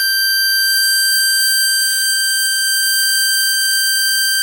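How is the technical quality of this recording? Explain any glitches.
There's one glitch worth flagging in this music. From 1.86 s to the end, the adaptive stream drops to a lower bitrate. The connection likely slowed and the player switched versions mid-stream, with no gap. The sound suddenly gets swirly with codec artefacts, which fits a step down from about 64 to 32 kbit/s Opus.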